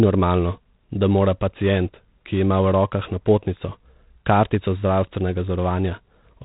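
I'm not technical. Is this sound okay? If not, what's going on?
No. Throughout the speech there is G.726 ADPCM damage, a telephone-style coding that stores only rough guesses of each sample's change. It adds a harsh, rasping hiss that rises and falls with the speaking level, and removes everything above 3.9 kHz, leaving it dull.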